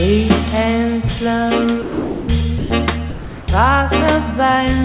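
Likely sound dropped by the voice detector: transmission halted and comfort noise filled in from 1.82 to 2.28 s, 2.58 to 2.70 s and 3.10 to 3.48 s, so the sound gives way to flat steady noise before returning, over a band that stops at 4 kHz.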